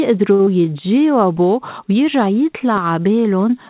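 A packet arriving late at the receiver emptied the jitter buffer at 0.34 s in this speech recording, causing a short stall from a late packet: the last sound is stretched by about 51 ms until 0.41 s, then resumes where it stopped. Nothing is lost, but that moment is held too long with a faint buzz or dip, and playback now runs about 51 ms further behind. Right after, at 0.45 s, packets failed to reach the decoder in time, producing short concealed packet loss through 0.49 s. About 40 ms of real audio is gone, bridged by only 15 ms of extrapolated sound, so the delay shrinks by roughly 30 ms and the passage is heard as a quick smear or wobble where a brief sound may disappear. The audio also lacks any content above 4 kHz, which fits a G.711 A-law call codec.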